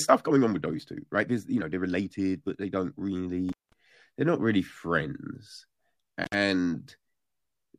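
Rushed speech runs at about 1.65 times normal pace from 0.0 to 3.36 s with its pitch unchanged, a time-stretched section likely made by software dropping short pieces to shorten it. The speech then cuts out with crackle at its edges from 3.49 to 3.73 s for about 0.2 s, and again from 6.24 to 6.35 s for about 48 ms, an intermittent contact where a loose cable or plug briefly opens the line.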